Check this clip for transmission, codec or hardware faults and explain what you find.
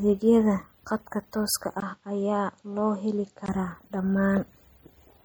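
Two faults are audible: a watery, smeared quality through the whole clip, and a stretch where the speech turns dull and boxy before clearing again.

Across the full clip the speech has a swirly, watery texture, with metallic chirps on s sounds and softened consonant attacks. This is most likely MP3 compression at a low bitrate, around 48 kbps. With so few bits the encoder cuts the treble and drops weak frequency lines. Those lines flicker in and out from frame to frame, which produces the chirping, and the attacks come out smeared.

From 1.80 s to 3.48 s, just after "khadka tooska", the speech goes dull and boxy. It drops around 5 dB in level and gains a faint new noise floor far beneath the speech. A 20 ms gap marks the change. The likely cause is an input switched to a poorer device, such as another microphone or a headset call profile. That device's narrower band leaves nothing above 7.6 kHz, and the original brighter sound returns at 3.48 s.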